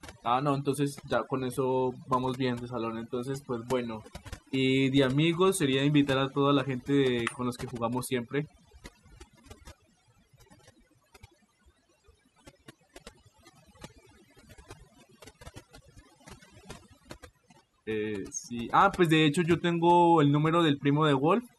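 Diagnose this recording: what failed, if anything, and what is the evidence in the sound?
Overdone noise removal, at the processing stage, runs throughout. Background drops and breaks up into twinkling specks. Over-strong suppression gates quiet bands, taking quiet parts of the speech with them.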